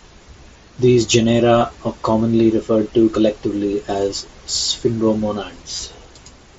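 At 1.59 to 1.61 s, just before "are commonly referred to", and again at 5.76 to 5.79 s, concealed Bluetooth headset packet loss fills roughly 22.5 ms of missing audio, which fits three consecutive lost frames. The receiver loops the best-matching recent stretch, giving a brief buzzy tone held at full level, then a small warble as real speech resumes. On the waveform, short repeated cycles replace natural variation. A spectrogram shows evenly spaced harmonic stripes under the mSBC codec's 8 kHz ceiling.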